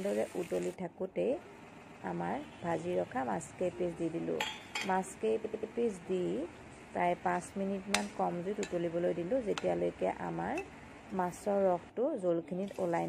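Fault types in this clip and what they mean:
Repeated frames: a stretch of compressed frames got written or sent more than once, so the decoder plays the same slice of audio again and the sound stutters. You hear it twice here. Around 1.72 s a block of about 139 ms comes back for two extra plays. Near 5.44 s a shorter block of about 93 ms comes back three extra times. Each burst adds roughly 0.28 s to the running time.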